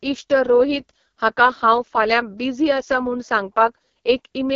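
From start to end the speech carries heavy AMR wideband (HD Voice) codec damage. Nothing is present above 7 kHz, and the harsh, raspy texture fits the lowest 6.6 kbit/s mode, where the pulse-driven vocal tract model is starved of bits.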